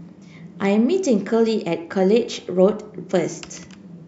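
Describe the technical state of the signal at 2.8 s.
The signal at 2.8 s is intact, with no audible technical fault at that point in the speech.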